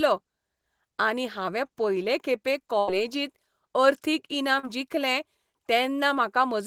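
A burst of packet loss hits this speech clip from 2.79 to 2.89 s. The receiver stretches the last sound for 78 ms, fading it to a buzz or hiss, and 80 ms of speech never returns. A short concealed packet loss at 4.59 to 4.65 s briefly smears the sound as 36 ms of extrapolated audio covers 40 ms that arrived too late.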